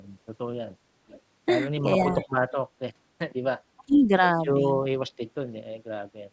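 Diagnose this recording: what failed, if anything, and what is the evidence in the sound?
Echo leak in call processing: faint copies trail the speech by 439 ms at 1.08–1.21, 1.98–2.32, 2.51–2.57 and 3.94–3.98 s. The fixed lag, unlike diffuse room reverb, likely marks echo-canceller residue.

Speech suppressed in double talk: between 3.77 and 4.10 s the speech dips by up to about 25 dB while echo is present, likely canceller ducking. These are level dips, not packet-loss gaps.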